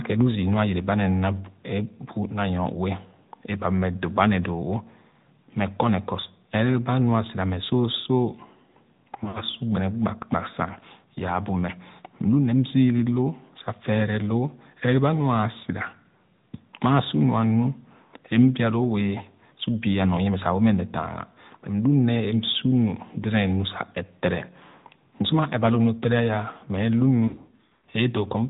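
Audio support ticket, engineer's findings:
AMR narrowband mobile codec, whole clip: nothing above 4 kHz, buzzy synthetic edge on the speech, which fits a mid-rate AMR-NB mode around 10 kbps. Pulse-driven vocal tract model at work.

Lost AMR speech frames, 9.24–9.43 s and 27.28–27.85 s: decoder repeating the last good frame and fading it, so the audio smears, dips and comes back rough. Longest gaps about 60 ms and 100 ms.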